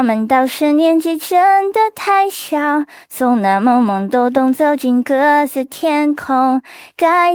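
No technical fault can be heard anywhere in this clip. The sound carries on without any break, dropout or interruption from beginning to end.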